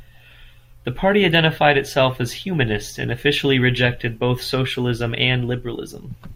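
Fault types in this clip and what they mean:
Nothing stood out on listening to this speech recording.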